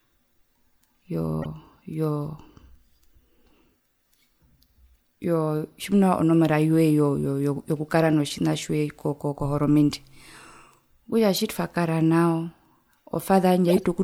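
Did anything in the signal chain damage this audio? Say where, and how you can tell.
Yes, at the codec stage: a corrupt frame decoded at 1.42 to 1.46 s gives a brief chirp spanning a couple of frames, and a longer, louder burst at 13.70 to 13.83 s covers several. Flipped bits misplaced energy across frequencies, unlike dropout concealment's smooth fill.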